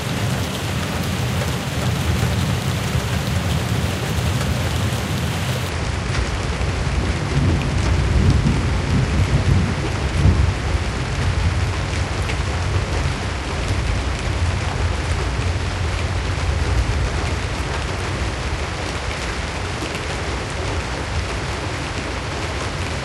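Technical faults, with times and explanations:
5.69 s to the end, section at the wrong speed: the sound suddenly turns slower and deeper, running at 0.703 times normal speed and about seven semitones low, likely because this part was played against the wrong clock, which shifts speed and pitch together.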